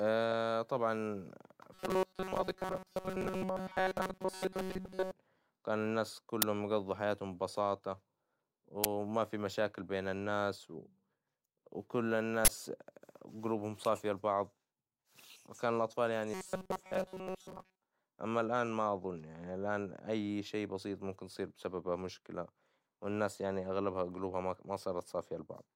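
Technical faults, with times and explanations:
0.31–0.33 s and 4.85 s, corrupt frame decoded: damaged compressed data was played anyway, so energy lands at wrong frequencies for about a frame, heard as brief glitches. A spectrogram shows short, out-of-place vertical smears, around -30 and -35 dBFS.
1.74–5.11 s and 16.34–17.81 s, robotic sound from repeated short buffers: the sound turns into a rigid metallic buzz at 188 Hz. This is likely caused by tiny chunks of about 5.3 ms being looped while most of the real audio is skipped. The spectrogram shows evenly spaced horizontal harmonic lines, and the waveform shows identical repeating cycles.
6.42 s, 8.84 s and 12.45–12.49 s, uninitialised buffer: blocks of 10 ms, 10 ms and 40 ms were played before real audio filled them, so leftover memory came out as digital bursts. The waveform shows abrupt spikes, and the spectrogram shows broadband columns, possibly with tonal streaks.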